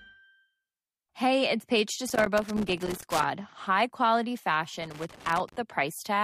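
Irregular bursts of crackle and scratching break into the speech twice, first from 2.08 to 3.24 s and again from 4.78 to 5.56 s. Both are loose connector crackle: a worn or dirty contact somewhere in the cable run is shifting and repeatedly losing and regaining connection, chopping the signal into fragments over roughly a second each time, while any DC present on the line turns each make and break into a pop.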